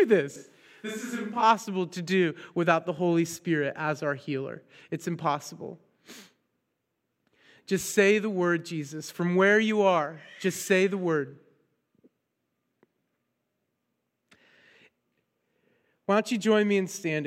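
Speech recording with a switch to a distant microphone from 0.36 to 1.4 s: the sound abruptly turns roomy, hollow and thin, drops about 10 dB, and carries room noise roughly 35 dB below the speech, snapping back before "to do without the". The likely cause is a failed close microphone.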